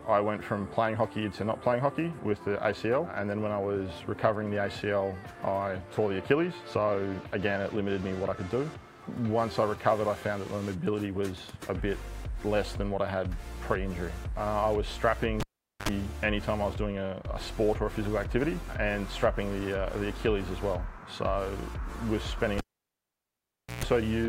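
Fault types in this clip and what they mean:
Cable pulled and plugged in: a live connection is broken and remade, giving a pop as contact is lost, near silence while unplugged, then a short mains buzz as only the plug tip touches, and a second pop when the signal returns. It happens twice. At 15.40–15.89 s the gap lasts about 0.43 s with 63 ms of 50 Hz buzz. At 22.58–23.84 s the gap lasts about 1.21 s with 129 ms of 60 Hz buzz.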